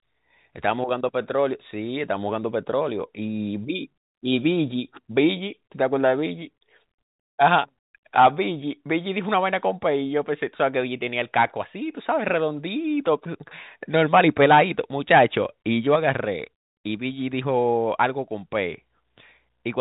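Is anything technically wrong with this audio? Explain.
No, nothing in this speech recording stood out as a technical problem on listening.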